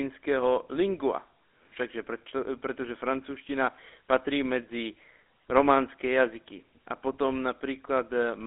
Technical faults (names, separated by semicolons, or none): GSM full-rate codec